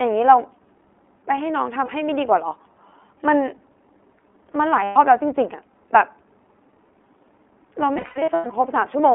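The whole clip runs through the iLBC codec, band-limited to roughly 250 Hz to 3.5 kHz. The speech is clear but audibly rough and synthetic, which fits its 15.2 kbps, 20 ms frame mode. There are lost iLBC frames at 1.84–1.90 s, 4.84–4.98 s, and scattered across 7.94–8.52 s with runs up to about 100 ms. In each, the decoder repeats the last pitch cycle as a buzzy, held vowel, then recovers almost immediately.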